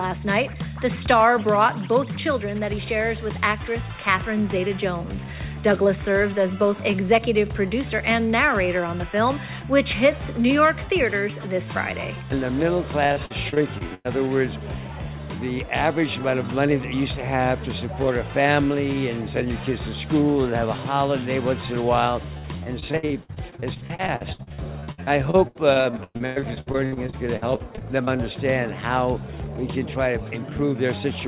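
Repeated packet loss gives the audio a choppy, robotic sound in two stretches: 13.06 to 14.11 s, then a longer run from 22.38 to 28.21 s. Short holes keep opening, each up to about 0.1 s. Each is papered over by stretching the last bit of sound, so roughly a quarter of both stretches is patched filler. The audio travels a call path that stops near 4 kHz, which fits a G.711 codec.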